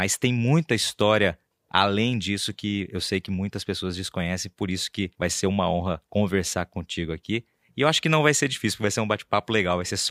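No technical faults can be heard in the recording.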